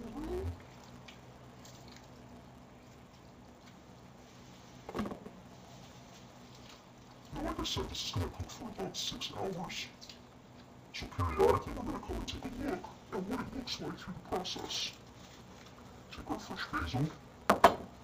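Throughout, interleaved audio is read as planar. Each 5.8 ms block is split wrongly, so the sound turns dull and robotic, buzzing near 172 Hz.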